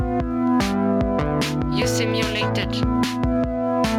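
Right through the clip there's gain pumping: the background swells up in every gap, then ducks by something like 10 dB each time a loud sound hits. It's likely input gain cranked way too high, with a fast limiter clamping down, so everything sounds squashed.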